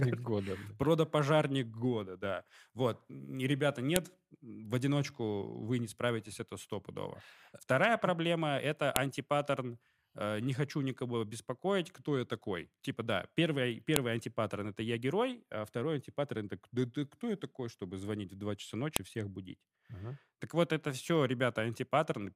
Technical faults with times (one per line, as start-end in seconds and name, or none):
3.96 file header played as audio
8.96 file header played as audio
13.96 file header played as audio
18.96 file header played as audio